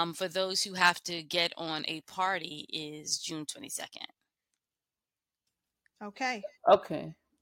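No technical faults can be heard anywhere in the speech.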